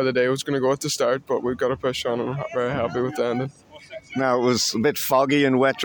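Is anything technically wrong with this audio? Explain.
No, nothing in this one stands out as a technical problem; it all sounds just as it should.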